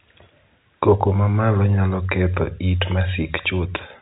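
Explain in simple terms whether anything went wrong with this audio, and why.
Nothing went wrong with this speech recording. It has the muffled, narrow sound of an ordinary phone call, because it passed through G.711 telephone coding, which carries nothing higher than about 3.8 kHz.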